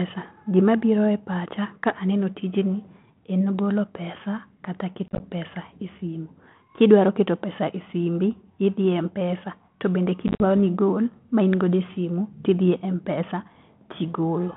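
From 5.08 to 5.25 s, between "en golo pesa kata" and "pesa esimu", packet loss on an ADPCM call punches about 70 ms of silence into a 120 ms stretch, the longest gap 30 ms. At 10.28 to 10.44 s, just before "nigol ma in godo", about 80 ms goes missing, with one 50 ms hole. After each gap the decoder's predictor and step size disagree with the sender's, so speech resumes briefly and slightly distorted. On a waveform these are flat, hard-edged dropouts; on a spectrogram they are blank vertical slots in a band capped near 3.4 kHz, which fits G.726 at 32 kbit/s.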